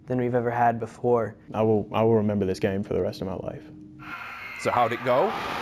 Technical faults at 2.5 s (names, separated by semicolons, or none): imaging from linear upsampling